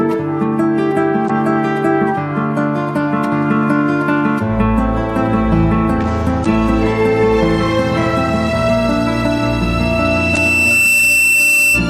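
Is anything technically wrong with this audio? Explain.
Yes. There are two kinds of fault.

Damaged data in a compressed stream hits at 1.26–1.30 s, 6.42–6.46 s and 10.33–10.37 s. Corrupted frames throw the decoder off sync until it finds the next header, leaving a 40 ms glitch. Each one shows as a brief broadband smear on a spectrogram and a jagged glitch in the waveform.

A loudspeaker feedback squeal starts at 9.35 s and runs to the end. The microphone picks up its own loudspeaker, and the loop gain exceeds one at 2.7 kHz. That tone swells over roughly a second and a half to about 5 dB above the sound, drawing a bright horizontal line on a spectrogram and a rising envelope in the waveform.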